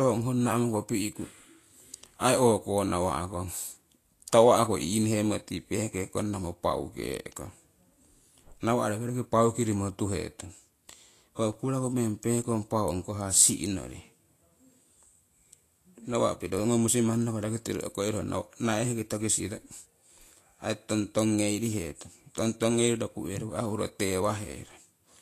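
A speech recording runs throughout with a hissy, grainy treble, roughened tonal sounds and softened attacks, and nothing is heard above 14.2 kHz. This points to Vorbis compression at a low quality setting, likely around 36 kbps, with plainly audible codec damage. The encoder keeps a smooth outline of the spectrum but quantises the fine detail on top of it so coarsely that the upper band turns into noise of similar energy, and it removes everything above the cut-off. At 11.53 s there is a single sharp tick where the sound drops out for about 5.8 ms. This is a block of digital silence: the samples were replaced by zeros, which fits a 256-sample buffer that was not filled in time. Because the audio jumps straight to silence and back with no fade, the two edges merge into one click rather than an audible gap.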